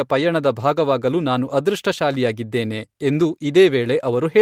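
No technical faults can be heard in this recording.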